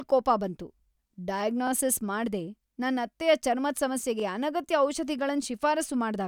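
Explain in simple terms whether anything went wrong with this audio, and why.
Something did go wrong: this speech clip has overlapping chunks. The audio was handled in pieces about 2.5 s long, and each new piece started roughly 23 ms before the previous one finished, so that sliver plays twice. You hear it as a quick stutter or click at 1.67 to 1.70 s, just before "ಮಾಡ್ದೆ ನನ್ ಅತ್ತೆಯ ಚರ್ಮದ್", and again at 4.20 to 4.22 s, right after "ಮಾಡ್ದೆ ನನ್ ಅತ್ತೆಯ ಚರ್ಮದ್".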